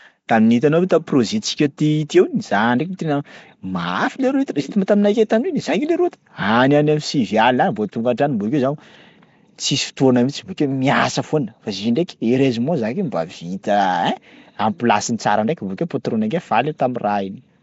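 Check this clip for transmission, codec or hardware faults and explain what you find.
Throughout the speech there's a rough, hissy halo and a smeared, underwater quality, with nothing above about 7.7 kHz. That's likely Nellymoser compression: small blocks at a low fixed bit depth, weak bands swapped for noise, fitting roughly 32 kbps.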